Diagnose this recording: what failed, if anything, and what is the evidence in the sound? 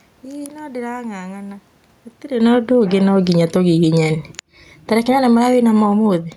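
Automatic gain falling, in call processing. Reacting to input that was too loud or too noisy, gain sinks about 8 dB over 2.29–3.56 s, then about 6 dB over 4.23–6.32 s, background with it.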